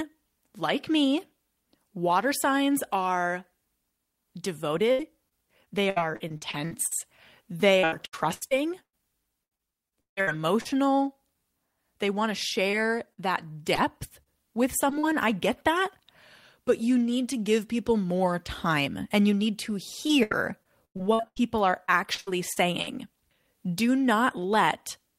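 From 4.91 to 6.93 s the speech breaks up with repeated packet loss (robotic sound). Eleven gaps, the longest 74 ms, were patched by extending the preceding audio, so about 0.4 s, roughly a fifth of the stretch, is synthetic. It sounds choppy, with pieces missing. On a spectrogram the patches show as short blocks of frozen, smeared harmonics that fade at their edges. On the waveform they appear as runs of near-identical repeating cycles.

The same fault returns from 7.79 to 10.67 s. Here there are nineteen gaps, the longest 153 ms, and about 0.82 s is filled, roughly 28% of the span. The frozen-harmonic blocks are more frequent here, and some are wider.

Between 12.71 and 14.28 s come scattered short gaps. There are around four isolated losses, totalling about 0.1 s, the longest around 50 ms. The audio stays clear between them, and each one comes through as a brief tick or smear. On a spectrogram each shows as a narrow vertical band where the detail goes smooth or blurred.

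Just before "I get that" there are two instances of short concealed packet loss. The first is 20 ms missing at 14.90 s, and the second is 40 ms missing from 14.99 to 15.05 s. The decoder filled each hole by continuing the last sound and then blending back into the real audio, which gives a quick wobble. On the waveform each appears as a few repeated cycles. On a spectrogram each is a thin smeared slice.

After "and you need to", repeated packet loss (robotic sound) takes over again from 20.07 to 22.89 s. There are fifteen gaps, the longest 99 ms, with about 0.6 s concealed, roughly 22% of the span. The sound turns choppy again, with the same pattern of frozen-harmonic blocks on the spectrogram.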